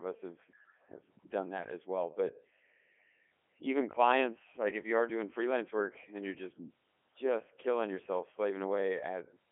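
Throughout, the speech sounds robotic and buzzy, thin below 250 Hz and with nothing above 3.7 kHz. This is Codec 2 vocoder damage: the decoder rebuilds the voice from sine waves using only pitch, voicing, energy and envelope, heavily, in a way that fits its 3.2 kbit/s mode.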